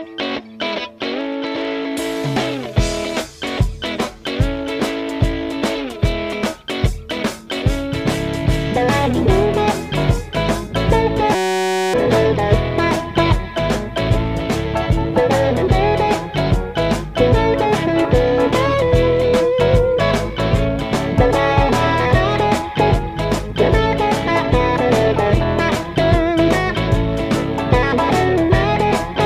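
From 11.35 to 11.94 s, a system hang loop: playback froze, repeating one 5.33 ms buffer as a steady 188 Hz buzz over roughly half a second.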